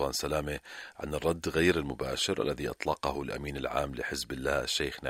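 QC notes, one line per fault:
Nothing to flag here, so no entries on the fault list for this one.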